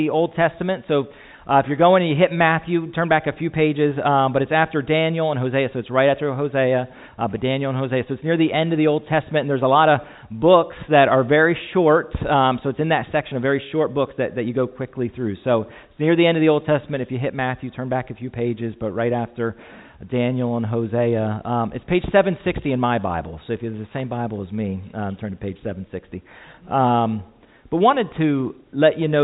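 Nothing stood out on listening, with the audio staying within the narrow call band that tops out at 4 kHz, as a G.711 A-law call path would give.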